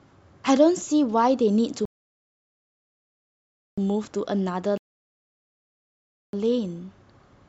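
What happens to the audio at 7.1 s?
Nothing goes wrong at 7.1 s; the speech there plays through intact, with no dropout, click or distortion.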